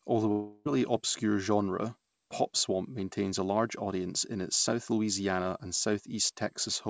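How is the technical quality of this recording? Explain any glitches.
The recording has one clear glitch near the start. From 0.32 to 0.67 s, just before "obscure genre swamp pop", there is likely a long network dropout. About a third of a second of speech never arrived. The receiver bridged the gap by stretching the last sound into a fading buzz or hiss instead of going silent, then resumed with that stretch missing. A brief packet loss would produce only a tiny blip. Here the filler lasts long enough to be heard decaying, and speech is skipped rather than delayed. Nothing above 8 kHz comes through, which fits a G.722 call codec.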